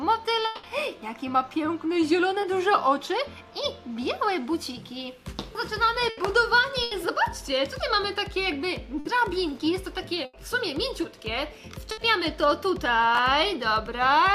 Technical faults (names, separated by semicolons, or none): long network dropout; short concealed packet loss; burst of packet loss; chunks out of order